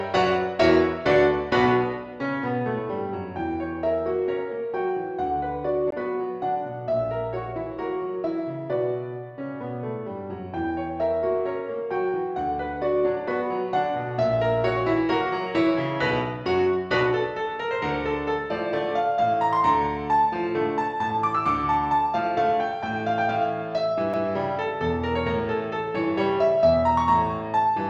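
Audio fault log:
5.91 s and 24.13 s, CD skip: a brief mute of about 15 ms, then only a few milliseconds, each heard as a tick. The laser jumped tracks, so playback resumes from a different point on the disc. Unlike a plain dropout, the audio does not continue where it stopped.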